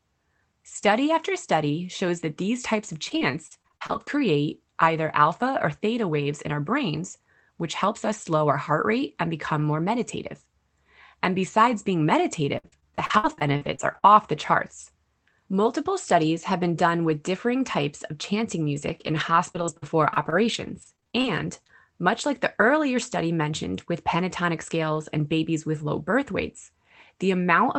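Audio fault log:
2.93–4.21 s, 12.58–14.04 s and 18.76–21.71 s: repeated packet loss (robotic sound). Each stretch has a string of short holes, the longest 59 ms near 13 s. Each hole is filled by extending the preceding sound, so the speech turns choppy with pieces missing. Roughly a third of the middle stretch is patched, and the band-limited call sound stops near 8 kHz.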